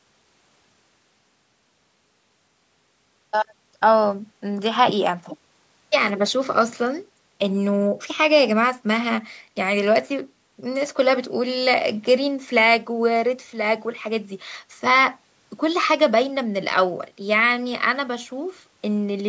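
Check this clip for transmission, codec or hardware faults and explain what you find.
No transmission, codec or hardware faults are audible here.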